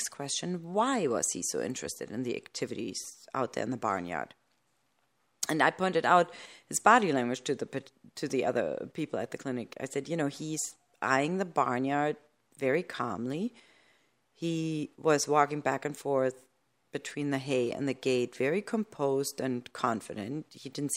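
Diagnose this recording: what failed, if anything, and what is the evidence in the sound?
Nothing in this speech recording points to a failure at any stage, so there is no fault to diagnose here.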